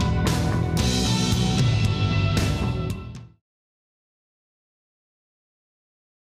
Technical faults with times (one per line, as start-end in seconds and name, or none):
none